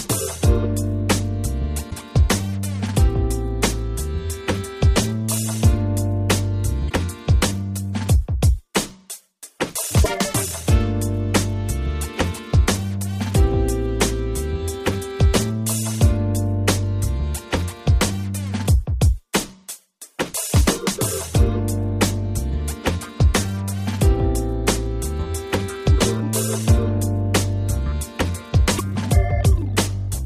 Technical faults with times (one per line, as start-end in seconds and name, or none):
1.87-1.92 damaged data in a compressed stream
6.86-6.91 damaged data in a compressed stream
10.02-10.06 damaged data in a compressed stream
28.75-28.81 damaged data in a compressed stream